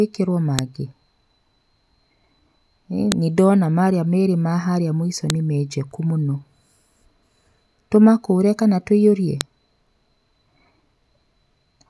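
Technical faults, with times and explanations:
0.59, 3.12, 5.30 and 9.41 s, file header played as audio: each is a single sharp snap where a new piece of the recording begins and its leftover header bytes play as samples. Unlike a dropout or splice click, it lands regardless of the speech level.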